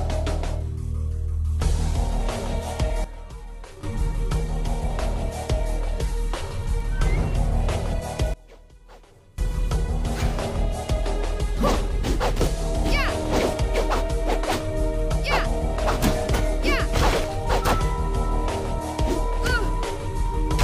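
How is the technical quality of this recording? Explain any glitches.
Two sudden gain jumps mar the recording. A digital gain change, likely applied without a ramp, drops the level at 3.04–3.83 s by about 12 dB and at 8.34–9.38 s by about 24 dB, with sound and background noise falling and returning together.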